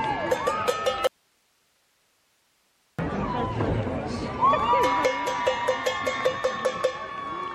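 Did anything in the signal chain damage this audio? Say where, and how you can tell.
Yes. Audio dropout to a faint residue, 1.07–2.99 s, likely an intermittent analogue connection: the waveform abruptly collapses to hiss about 40 dB down, a faint, flat spectrogram band.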